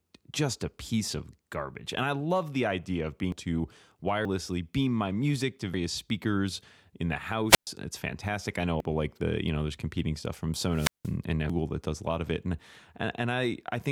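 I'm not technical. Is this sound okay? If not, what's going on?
No. Two kinds of fault interrupt the recording.

The first is compressed frames skipped. The audio is stored in blocks of about 93 ms, and some blocks never get played, so the speech suddenly jumps forward. This happens at 3.32 s, 4.25 s (just before "beam my music to"), 5.74 s (between "beam my music to" and "speakers in the"), 8.80 s (between "fantastic I know a" and "like the you know") and 11.50 s. The jumps lose anywhere from about a tenth of a second to nearly half a second of speech, with the longest at 8.80 s. There's no pause at these points. The words just jump where they join.

The second is wireless microphone squelch dropout. The radio link from the microphone weakens, and the receiver briefly switches the sound off. This happens from 7.48 to 7.67 s and from 10.71 to 11.14 s. Each time, hiss rises, then there's a short gap of near silence, roughly an eighth of a second and then nearly a fifth of a second. 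After that the voice comes back. The hiss and the actual gap are what separate these from the skips, which jump ahead instantly without going quiet.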